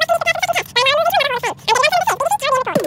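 A wrong sample rate runs throughout, which fits 16 kHz audio played back at 48 kHz: the sound runs three times too fast and about 19 semitones high.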